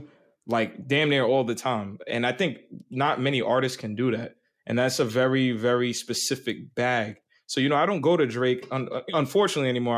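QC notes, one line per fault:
No technical faults are present in the speech recording; the signal path holds steady for its entire duration.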